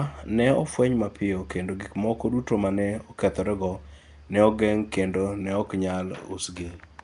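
Right through the speech there's a rough, hissy halo and a smeared underwater feel with nothing above 10.7 kHz, likely Nellymoser compression at something like 44 kbps.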